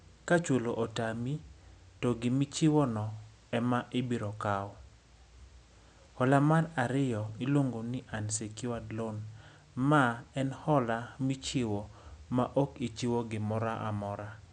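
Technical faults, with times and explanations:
No technical faults can be heard in this speech clip. There is room noise in the background, sitting about 35 dB below the speech, and it belongs to the recording space rather than to the system.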